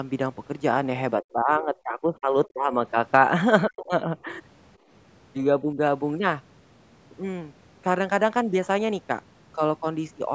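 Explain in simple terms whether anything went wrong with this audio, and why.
The talker's voice sinks several times: from 1.19 to 2.75 s it drops sharply, from 3.66 to 4.29 s it nearly vanishes, and around 5.74 s there is a slight dip. This is likely speech suppressed in double talk. When both sides talked at once, the echo canceller confused this voice with loudspeaker echo and turned it down.

From 4.78 to 4.89 s it is the room sound, not the voice, that briefly dips and then comes back. That is background gated by the echo canceller, a short clamp-down on the microphone while the loudspeaker played. Unlike the double-talk dips, it hits only the background, for about a tenth of a second.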